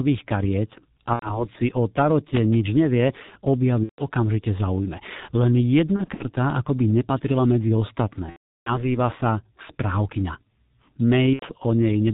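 Throughout, the G.723.1 codec at 6.3 kbit/s leaves the speech heavily muffled and hoarse, with nothing above 4 kHz and consonants smeared. Its slow 30 ms model updates set it apart from simple low-pass filtering, which would not roughen the voice.

VoIP packet loss concealed by the speech codec occurs at 1.13–1.50 s, 3.83–4.03 s, 5.96–6.25 s, 8.30–8.90 s and 11.33–11.48 s. The decoder stretches its last pitch and filter into a fading buzzy tone or coloured noise, which is muted once three frames in a row are lost. The losses run about 90 to 360 ms, scattered around 5.96 s. The voice stays weak after each one, which a plain dropout would not do.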